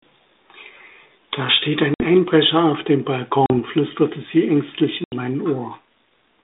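Hard-edged silent holes cut the speech at 1.94 s (60 ms), 3.46 s between "auf dem" and "flüsterte sie ängstlich" (40 ms), and 5.04 s just after "flüsterte sie ängstlich" (80 ms). After each, the speech returns slightly distorted before settling. This is packet loss on an ADPCM call. A few packets went missing and were filled with silence, so the decoder's adaptive predictor and step size lost step with the sender's and took tens of milliseconds to recover. The narrow, telephone-band G.726 sound fits 32 kbit/s coding.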